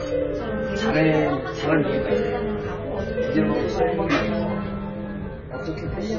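Throughout, the sound is dull and smeared, with nothing above 6.9 kHz, pointing to heavy AAC compression, likely AAC-LC at around 16 kbps.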